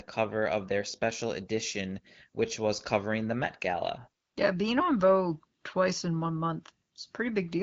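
No technical faults can be heard anywhere in the recording. The speech has gone through the AMR wideband (HD Voice) codec at 15.85 kbit/s, which leaves only light coding damage, with the top band from 6.4 to 7 kHz filled by shaped noise as that codec is designed to do.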